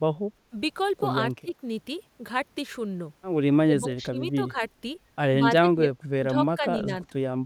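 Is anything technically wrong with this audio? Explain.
Yes. The voice repeatedly dips or drops out in pieces: at 1.41–1.54 s by up to about 20 dB, at 3.64–4.17 s by about 15 dB, at 4.36–4.58 s by about 10 dB, at 5.39–5.88 s by about 20 dB, then shallower dips of about 5 dB at 6.31–6.38 s, 6.55–6.66 s and 6.85–7.06 s. This is likely speech suppressed in double talk, where an echo canceller confuses overlapping talk with echo and attenuates both.

Around 1.49–1.53 s a faint copy of the voice, about 35 dB below it and trailing by 135 ms, briefly slips through. That is likely echo leak: loudspeaker sound the far end's canceller failed to remove, returned as a delayed scrap.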